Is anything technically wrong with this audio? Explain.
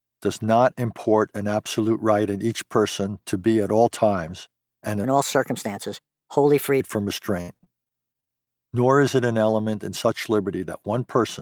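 Yes, the speech has two faults. A section at the wrong speed runs from 5.04 to 6.80 s, just after "at all times and": it plays 1.24 times too fast and sits roughly four semitones high, hurried and thin, most likely because that stretch was fitted to the wrong playback clock.

Repeated packet loss (robotic sound) follows from 7.41 to 8.48 s. What sounds like about ten dropouts, the longest 66 ms, are each patched by stretching the preceding sound, so about 22% of the span is filled in, leaving choppy, metallic speech with pieces missing.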